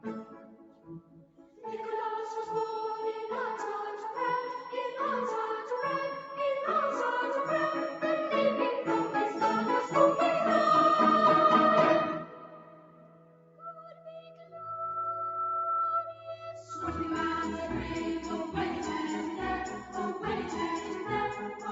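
A noise suppressor applied to music or sounds runs through the whole clip. It is tuned for speech, so it treats sustained tones, ambience and reverberant tails as noise and pulls them down while transients pass. The gain keeps moving over a range of about 10 dB, and the sound pumps and thins as held material sinks between attacks. The audio is band-limited at 8 kHz, consistent with the call path it travelled through.

The suppressor cuts the sound hardest in three places. From 0.24 to 1.63 s it drops by about 12 dB. From 12.19 to 14.64 s it drops by about 12 dB again, the longest stretch. From 16.06 to 16.71 s it drops by about 11 dB. In each case the steady or decaying part of the sound is judged to be noise and attenuated, so level collapses and tails end early while onsets stay largely intact.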